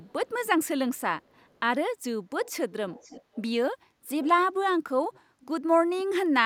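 Echo leak shows up as faint delayed copies of the speech at 0.03–0.29, 1.24–1.6, 2.45–2.52, 2.9–3.43, 4.22–4.28, 5.12–5.2 and 5.4–5.46 s, lagging by 427 ms in the first two and 490 ms afterwards, very quiet early and louder around 4.2 s. The likely cause is a far-end echo canceller letting loudspeaker pickup slip back. Unlike room reverberation, which smears each sound into a smooth tail, this is a distinct repeat arriving nearly half a second late.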